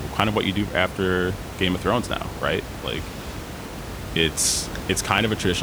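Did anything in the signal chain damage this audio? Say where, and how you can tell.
Yes. Regular clicks every 1.24 s from 0.20 to 5.18 s point to the buffer stage: likely clock drift buffer slips, from clocks mismatched by roughly 500 ppm.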